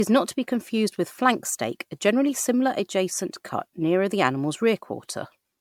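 Across the whole speech clip the sound is swirly and hollow, with consonant attacks smeared rather than crisp. This is generation loss, likely from repeated MP3 encoding, roughly four passes at a rate that fits about 100 kbit/s. Each re-encode quantised on a shifted frame grid, so the damage accumulated. On a spectrogram, expect scattered holes and blotchy high-frequency texture, with nothing above 20 kHz. The waveform shows softened transients.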